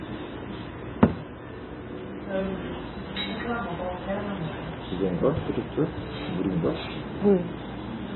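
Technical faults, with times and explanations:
Throughout, MP3 compression: likely an MP3 encoder starved of bits, which fits a rate near 16 kbps, removed everything above 4 kHz and zeroed weak frequency lines that flicker between frames, so the sound is dull, heavily watery and swirling, with smeared attacks.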